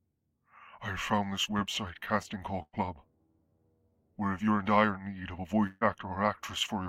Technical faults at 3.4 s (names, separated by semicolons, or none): none